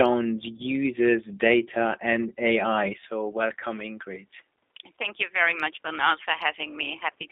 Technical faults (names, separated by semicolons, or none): G.729 codec; VoIP packet loss concealed by the speech codec; input switched to a poorer device